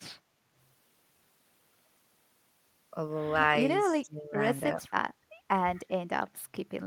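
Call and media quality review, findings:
Speech suppressed in double talk: talker's level dips sharply at 3.88–4.38 s (about 20 dB, roughly half a second), 4.75–5.02 s (about 15 dB) and 5.84–5.97 s (about 20 dB). Likely echo canceller mistaking near-end speech for loudspeaker echo while both sides talk, attenuating both.

Background gated by the echo canceller: room sound ducks about 15 dB at 5.30–5.48 s, returning after roughly 0.2 s. Echo canceller clamping microphone gain while loudspeaker plays, releasing once it lets go.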